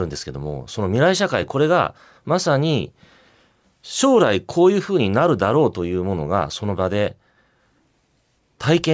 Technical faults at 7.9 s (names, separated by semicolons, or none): none